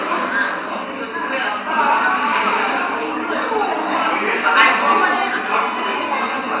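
No technical faults are audible anywhere in this recording of sounds.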